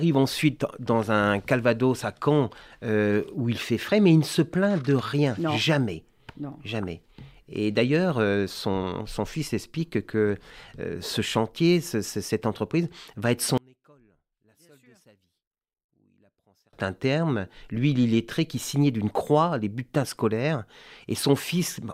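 One channel inverted, from 13.58 to 16.73 s in this speech recording: over that stretch the voice drops by about 36 dB and nearly disappears, leaving only a faint trace before it returns at full level. The likely cause is reversed polarity on one stereo channel, so the centred voice, identical in both channels, cancels when they are summed to mono, and only the small difference between them survives.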